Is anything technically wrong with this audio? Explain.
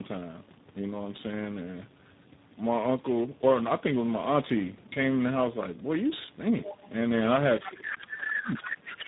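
Yes. The speech has three clear problems, and two of them are linked.

Tandem speech coding runs through the whole clip. The signal passed through three different speech codecs in a row: CVSD, then G.726 at 16 kbit/s, then G.729A at 8 kbit/s, with G.711 A-law links between them. Each coder re-encoded the damage left by the one before. The result is rough, muffled and warbly speech. Nothing remains above 3.8 kHz.

The other side's voice leaks through at 6.64–6.90 s, 7.58–7.95 s and 8.30–8.97 s. A second, fainter voice sits about 10 dB under the main talker. The likely cause is the talker's device playing the other side on a loudspeaker, with the echo canceller failing to strip it all from the microphone.

Speech is suppressed in double talk from 7.74 s to 9.07 s. This overlaps the last two leaks. The main voice dips, by roughly 20 dB at its worst, for about a second and a half in total. 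Both voices are active here. The echo canceller likely could not tell its own talker from the echo, so it turned both down.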